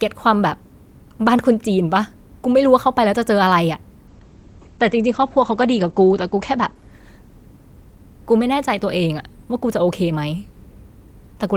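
From 4.1 to 8.73 s a call bitrate drop starves the encoder, fitting roughly 11 kbps; speech turns rough and watery, cut above 8 kHz.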